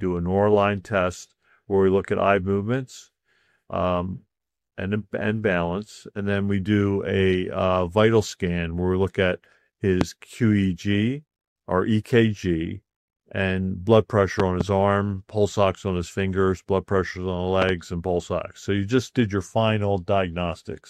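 A loud pop hits at 10.01 to 10.04 s, a single sharp burst about 20 dB above the sound. At 14.40 to 14.63 s a double pop follows, two thumps about 15 dB up. Another double pop comes at 17.62 to 17.72 s, again about 15 dB up. The sound carries on beneath each one. The likely cause is a sudden voltage step, from a switch, plug or static, shaped in the circuits after it.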